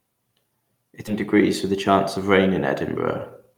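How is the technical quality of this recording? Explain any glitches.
Two timing glitches affect the speech. At 1.07 to 1.09 s a skip ahead drops about 0.7 s, so playback jumps straight across with no gap. From 1.33 to 2.48 s a jitter buffer speed-up trims short pitch-period pieces, about 70 ms in total, running the speech at 105% speed with unchanged pitch and a slightly hurried feel.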